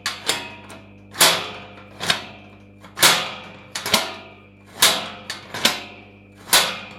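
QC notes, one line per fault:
Throughout: mains hum, a steady low drone at 50 Hz sitting some way below the sound, roughly 25 dB down, with some low harmonics. Power-line current is leaking into the signal, likely through a ground loop or a nearby transformer.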